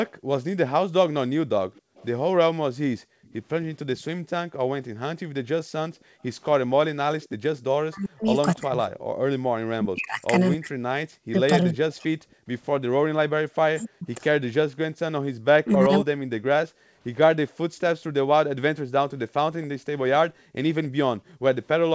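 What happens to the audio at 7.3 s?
A faint, delayed copy of the speech slips through from 7.22 to 7.29 s, about 30 dB below the main voice and trailing it by 274 ms. This is an echo leak, likely from a far-end loudspeaker whose echo canceller failed to remove everything its microphone picked up.

This moment also falls within a stretch where the room background ducks away at times. That is background gated by the echo canceller: between 0.19 and 17.0 s the canceller clamps the microphone by up to about 40 dB while the loudspeaker plays, briefly dropping the ambience, for roughly a second and a half in total.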